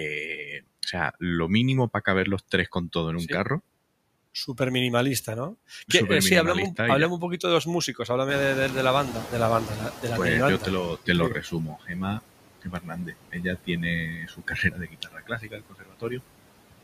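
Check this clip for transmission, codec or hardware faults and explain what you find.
The faults in this speech clip all come from the noise suppressor. None point to transmission, codec or hardware problems.

Noise suppressor artifacts run through the whole clip. The suppressor estimates the steady background in each frequency band and pulls those bands down frame by frame, here by about 21 dB. Between phrases the noise drops away, and under the speech it returns. On a spectrogram the noise floor pumps with the speech envelope, broken into speckled, flickering cells rather than an even wash.

The noise suppressor is catching up from 8.28 to 10.98 s. Around 8.5 s the room noise jumps by about 15 dB and settles about 12 dB under the speech. The suppressor's noise estimate lags behind that jump, so the louder background comes through with less reduction at first. Over about 2.7 s it is brought down by about 16 dB. 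A spectrogram shows a bright band of broadband noise at the onset that fades gradually. The waveform's floor thickens, then tapers.

Speech is cut by the noise suppressor at 11.3 to 12.2 s, 12.62 to 13.46 s and 14.05 to 16.22 s. The suppressor mistakes parts of the speech for noise and turns them down with it. The drops reach about 18 dB in the first stretch and about 22 dB in the other two. Roughly half a second, then most of a second, then about a second and a half is affected. The affected parts of the speech sound swallowed or faint. On a spectrogram, the affected speech energy is carved out. The waveform shows abrupt dips inside speech segments.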